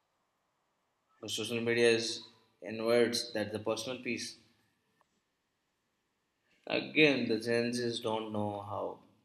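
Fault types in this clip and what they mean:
Nothing in this speech recording stands out as a technical fault, so there's no fault type to list here.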